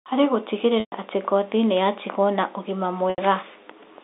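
At 0.80 s, just before "atĩ ngothi nĩyatigwo na", about 120 ms is lost to packet loss with pitch repetition. The last pitch period loops as a buzzy hold fading toward silence. At 3.10 s, after "ngothi nĩyatigwo na ũgima", an 80 ms loss gives a shorter hold.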